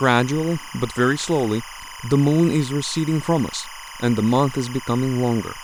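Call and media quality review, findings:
Timecode bleed, throughout the speech. Steady chirping warble behind the speech, about 15 dB below it. Alternates near 1 kHz and 2 kHz. Cadence matches 25-frames-per-second linear timecode. Probable component: adjacent timecode track or cable coupling into the audio path. Mechanism: square-wave code signal crosstalk, its two switching rates heard as two pitches. Check routing, shielding and track separation.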